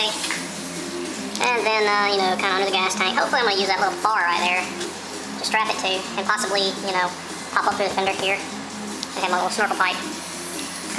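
Throughout the clip, samples captured at one rate are being played back at a higher one with no conversion, which fits 16 kHz audio played at 24 kHz. This wrong sample rate speeds everything up by 1.5 times and raises pitch by about 7 semitones, so the sound comes across hurried and high.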